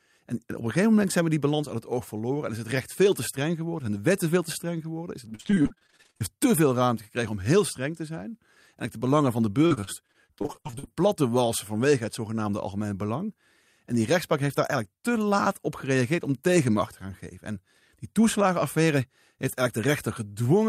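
Repeated packet loss (robotic sound) occurs twice in this speech. From 5.29 to 6.22 s, packets kept going missing or arriving late, and each gap was bridged by extending the previous sound. Nearly half the stretch is patched this way, in about seventeen holes of up to 45 ms, before "te veel ruimte gekregen". It recurs from 9.66 to 10.89 s, between "de belangen van de" and "plat te walsen vanwege", about a third concealed. Both passages sound choppy, with pieces missing.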